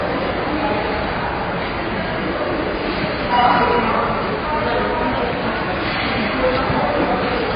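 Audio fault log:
Throughout, AAC compression: the sound is dull and smeared, with nothing above 5 kHz and a warbling, fizzy texture on sustained parts. This heavy damage likely comes from AAC-LC at a low rate, which fits 16 kbps, where the encoder drops the top band and quantises coarsely.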